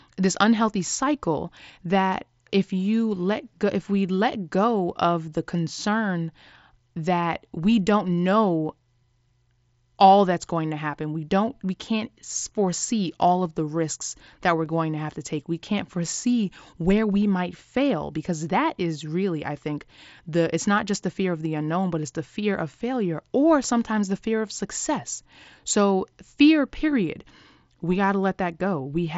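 At 14.65 s a single concealed Bluetooth headset packet loss drops about 7.5 ms of speech, patched with repeated recent waveform and nearly inaudible.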